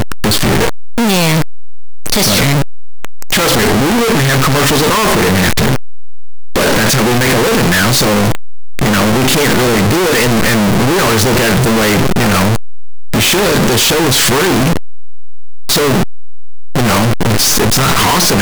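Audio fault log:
throughout: signed and unsigned mixed up. The speech sounds like loud, harsh, buzzing distortion, with soft sounds as loud as strong ones. The likely cause is 8-bit samples read with the wrong sign convention, flipping the top bit so every zero crossing leaps across the full range.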